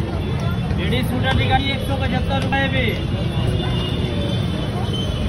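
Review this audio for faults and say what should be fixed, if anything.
At 2.52 s the audio skips: a short stretch, about 50 ms, is missing, and the material on either side is butted together with no gap of silence. This is likely audio missing between chunks, where a recorder or processor handling the signal in blocks of about one second drops a small piece while closing one block and opening the next. Only this one skip occurs. To prevent it, use double-buffered or overlapping block handling so that capture continues during the changeover.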